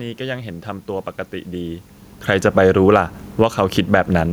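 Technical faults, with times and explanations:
2.14 to 3.6 s, automatic gain falling: the level sinks by about 6 dB over roughly a second and a half as the gain control judges the input too loud and backs its gain off step by step. The room noise drops with the speech, which separates this from the talker shifting position around one and a half seconds. On the waveform the envelope tapers steadily, and on a spectrogram every band dims together, including the noise floor between syllables.
2.8 to 4.28 s, automatic gain rising: beginning while the fall is still in progress, the control reverses and lifts its gain by about 3 dB, so speech and background swell back up together across roughly one and a half seconds. The two ramps overlapping make the level dip and then partly recover, ending a few decibels below where it started. The waveform envelope widens again toward the end, and the spectrogram shows the whole frame, noise floor included, brightening evenly rather than only the speech bands.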